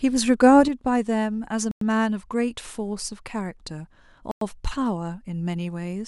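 One channel drops out at 0.68 s and stays lost to the end of the clip. From that moment the speech falls abruptly in level by about 6 dB, a step down rather than a fade, and it never recovers. The likely cause is that one side of a stereo pair went silent before the signal was summed to mono, so only half of the shared content reaches the output and anything carried by that side alone is gone.

A gap between chunks opens at 1.71 s and again at 4.31 s, each a hole of 100 ms. The speech cuts out and resumes as if nothing were missing, because the audio was delivered in pieces and silence was inserted at each join rather than replacing any sound. The two holes sit 2.6 s apart, which fits chunks of 2.5 s each followed by 100 ms of padding.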